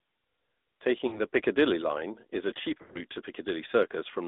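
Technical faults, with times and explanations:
Throughout: AMR narrowband mobile codec. The speech is coded as on a mobile call, with a vocal tract model fed by a few pulses per subframe. The band runs from about 250 Hz to 3.7 kHz, so there is no low warmth and no air on top. At 10.2 kbps the damage is plainly audible. It sounds buzzy and synthetic, with a thin, boxed-in tone.
1.08 to 1.21 s: lost AMR speech frames. About 40 ms of frames failed, enough for two 20 ms frames. The decoder repeated its last pitch and vocal tract settings at reduced gain. This gives a short dip or warble before normal coding resumes.
2.78 to 3.02 s: lost AMR speech frames. About 120 ms was lost, scattered over 160 ms, and the longest unbroken gap was 80 ms. During that gap the concealed sound stretches and fades toward silence. The shorter losses cause brief wobbles. When good frames return, the sound is weak or rough for a moment.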